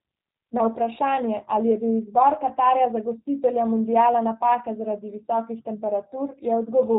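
From start to finish the speech carries G.729 codec damage, plainly audible. The sound has been rebuilt from a vocal tract model, a pitch predictor and a few pulses per frame, which gives voiced sounds a rough, synthetic buzz, with nothing above 4 kHz, consistent with an 8 kbit/s stream. A plain low-pass filter would only dull the top end. Here the texture of the voice itself is altered, with a faintly robotic graininess.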